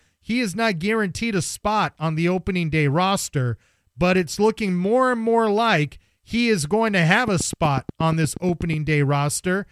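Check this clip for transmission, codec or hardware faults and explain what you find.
One fault turns up: a train of clicks from 7.28 s to 8.74 s, right after "is going to have". About fifteen identical pulses arrive at a steady 8.25 per second and peak roughly 10 dB above the speech, ticking over the sound and the gaps alike. The likely cause is electrical interference or a struggling interface injecting the same spike repeatedly. On a waveform they show as evenly spaced needle spikes; a spectrogram shows thin full-height vertical lines.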